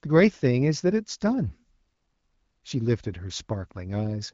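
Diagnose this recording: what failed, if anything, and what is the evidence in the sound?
Nothing in this speech recording points to a failure at any stage of the chain. The band stops at 7.5 kHz and the coding texture is light, which fits an AMR wideband (HD Voice) codec running at around 12.65 kbit/s.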